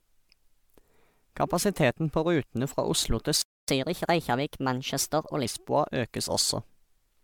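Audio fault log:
throughout, generation loss: the speech sounds swirly, hollow and smeared, and the consonant attacks are soft. That's more damage than one encode at this quality would do, so the likely cause is re-encoding around five times, each pass adding its own MP3 noise and spectral holes. It points to a chain at about 128 kbit/s, with nothing above 20.1 kHz.
3.42–3.68 s, playback stall: the speech cuts out mid-flow for about 0.27 s of dead silence, then picks up where it stopped. That fits the player likely running dry on data, or its thread getting blocked, and it sits silent until the buffer refills.
3.68–5.45 s, catch-up at higher speed: right after the gap everything runs 1.15 times fast, with pitch up about two semitones, so it sounds rushed and slightly chipmunky. The player is resampling its backlog to win back the lost time, then it settles back to normal speed.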